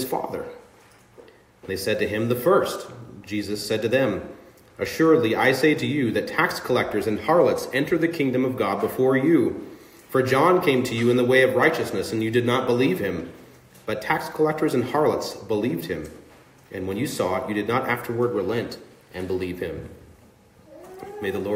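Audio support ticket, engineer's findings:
No faults found on listening, so nothing to trace to any component. No action needed on the audio chain for this ticket.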